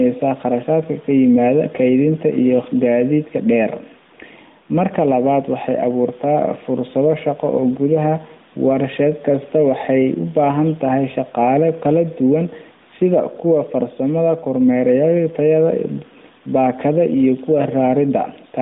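Throughout, gain pumping makes the background swell about 5 dB in pauses and duck under loud speech, likely from a fast limiter. A noise gate would mute those gaps instead of raising them.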